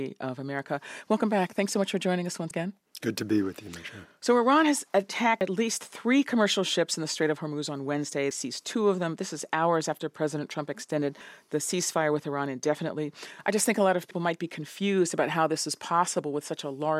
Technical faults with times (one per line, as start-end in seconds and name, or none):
2.51 audio missing between chunks
5.41 audio missing between chunks
8.31 audio missing between chunks
11.21 audio missing between chunks
14.11 audio missing between chunks